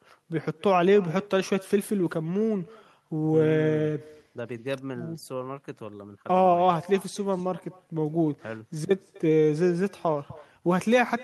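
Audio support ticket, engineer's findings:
Speech shadowed throughout by a faint, thinner copy trailing around 300 ms behind, about 22 dB down. Echo with no canceller: far-end loudspeaker output re-captured by its microphone, returned over the network round trip, no echo cancellation removing it.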